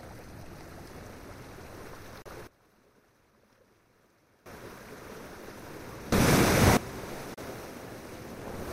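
Digital broadcast dropout at 2.22 s: the audio fades out over about 3 ms and stays silent until 2.26 s, a hole of about 32 ms, which fits a single frame failing its checksum. The receiver mutes rather than play corrupt data, so whatever was sent in that gap is gone.

Sudden gain jump at 2.47 s: the level, background noise included, drops abruptly by about 19 dB and stays low until 4.46 s, when it snaps back up. It was likely caused by a gain setting being applied from one sample to the next with no ramp.

Sudden gain jump at 6.12 s: this time everything jumps up by about 18 dB, holding there until 6.77 s before falling back just as abruptly.

Digital broadcast dropout at 7.34 s: a second 32 ms silence with the same quick 3 ms fade, ending at 7.38 s.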